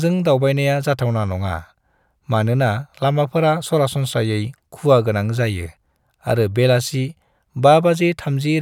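Nothing technically wrong turns up in this bit of speech; there's no fault to pin a time or a cause on.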